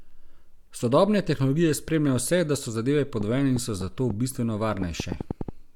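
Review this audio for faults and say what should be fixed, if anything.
A train of clicks, likely from interference by nearby equipment or a faulty connection or power supply, injects repeated pulses from 3.21 to 5.50 s, just after "vse da so zadeve". About ten similar clicks arrive unevenly, around 4.4 per second, popping roughly 10 dB above the speech. To prevent it, move or shield nearby electronics, check cables and interface connections, and confirm the interface runs stably before recording.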